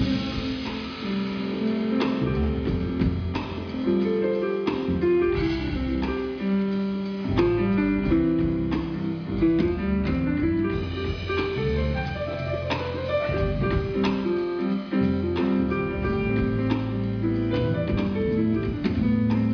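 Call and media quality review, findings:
No audible faults found.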